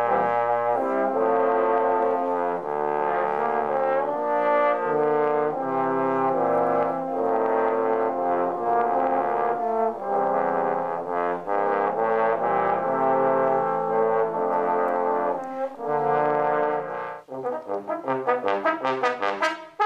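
No dropouts, distortion, timing errors or other technical faults can be heard anywhere in the recording.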